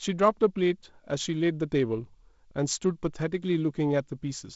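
Nothing stood out on listening to this speech clip, which carries the band-limited character of G.722 wideband telephone coding, with no content above about 7.7 kHz.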